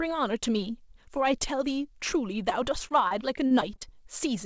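Speech clip carrying repeated packet loss, heard as robotic sound, from 2.50 s to 3.95 s. Audio repeatedly drops out across this stretch, with holes up to 39 ms, about 200 ms missing in total, most of it patched by extending the preceding sound, so about 13% of the span is concealment. The result is choppy speech with pieces missing. The band stops at 8 kHz, which fits a G.722 call codec on the WebRTC path.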